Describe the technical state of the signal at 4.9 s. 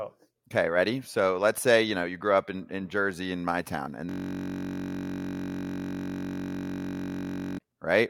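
At 4.9 s you're in the middle of a system hang loop, running from about 4.09 to 7.59 s, right after "in my town and". The machine stalled while the audio hardware kept replaying the same 21.33 ms chunk, which fits a 1024-sample ring buffer, so it comes out as a steady buzz at about 46.9 Hz.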